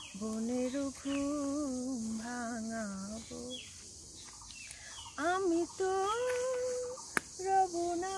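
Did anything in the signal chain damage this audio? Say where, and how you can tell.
No, no signal-chain damage heard.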